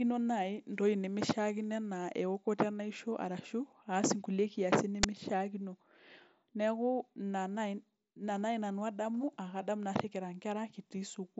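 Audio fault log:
5.03 s, uninitialised buffer: a sudden, loud crack of harsh digital noise, lasting 10 ms, breaks into the band-limited headset audio, which carries nothing above 7.7 kHz. A block of audio was sent to the output before any sound had been written into it, so whatever stale data sat in that memory was played as samples, producing values unrelated to the speech.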